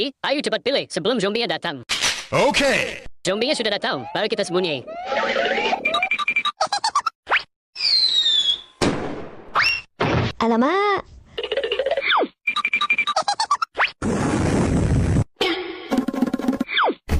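From 9.64 to 9.91 s there's processor overload crackle: about seven roughly 10 ms buffers get skipped, leaving hard-edged gaps that come across as a gritty tearing burst.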